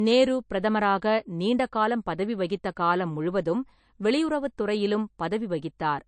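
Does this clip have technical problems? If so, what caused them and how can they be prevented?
Yes. Throughout the speech, nothing is heard above 9.3 kHz. This is low-bitrate audio saved at a high bitrate. The sound fits an MP3 near 36 kbit/s that was likely re-encoded at around 201 kbit/s. The larger second file cannot bring back what the first encoding removed. To prevent this, encode once from the original source at a sufficient bitrate.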